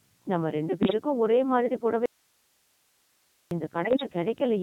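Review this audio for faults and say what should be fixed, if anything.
The whole clip passes through the Codec 2 vocoder, heavily degraded and consistent with its 3.2 kbit/s mode. The decoder rebuilds the speech from pitch, voicing, energy and a spectral envelope using sine waves, so the original waveform is gone and the voice sounds buzzy and robotic. Prevent this by carrying the audio over a higher-rate waveform codec.

Bit errors on digital voice radio appear at 0.82–0.94 s and again at 3.83–4.03 s. Corrupted bits set the pitch, level and spectrum of whole vocoder frames, which produces sudden warbles and bleeps. The later burst is longer and spans about twice as many frames. Error rates on the order of several percent fit a weak link. Prevent these errors with stronger forward error correction or a better signal margin.

An audio dropout to a faint residue runs from 2.06 to 3.51 s, about 1.45 s long. 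The speech cuts off abruptly and leaves only hiss about 45 dB down, then returns just as abruptly. The likely cause is a loss of the wanted signal while the downstream path stayed live. Prevent it by making the link hold reliably or by adding redundancy.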